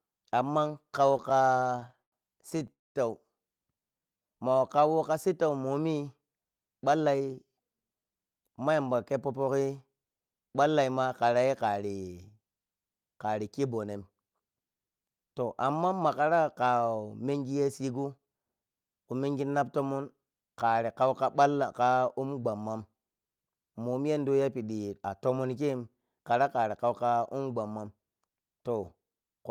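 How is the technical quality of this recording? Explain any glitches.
The speech has several network-playback glitches clustered early in the clip, plus occasional rushed passages later.

Repeated stalls (stutter), 1.07–2.14 s and 2.50–2.70 s: the speech catches and drags through 20, then 4, brief gaps (longest 103 ms). The jitter buffer kept running empty, and the receiver stretched the last sound each time.

Call audio freeze, 2.72–2.97 s: the sound drops to near silence for roughly a quarter second, then resumes where it stopped. The likely cause is packets held up in transit, adding 230 ms of delay.

Jitter buffer slow-down, 3.79–5.00 s, just before "ka sittau momi": the speech drawls at unchanged pitch, running at 89% speed. Repeated pitch periods added 140 ms to rebuild the buffer.

Jitter buffer speed-up, 6.93–9.49 s (109%), 17.83–18.49 s (111%, before "khu mengi nap tonon") and 27.71–27.97 s (111%): the speech sounds hurried at the same pitch. 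Trimmed pitch periods removed roughly 200, 70 and 40 ms of excess delay.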